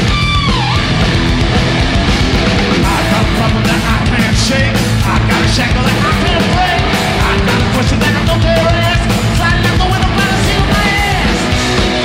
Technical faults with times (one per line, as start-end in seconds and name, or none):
2.36 bit error spike